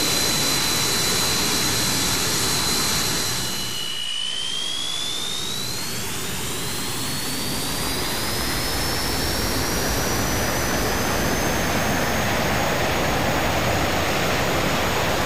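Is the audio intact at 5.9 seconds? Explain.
Yes, at 5.9 seconds the audio is intact, with no dropout, click, distortion or other fault audible at that point.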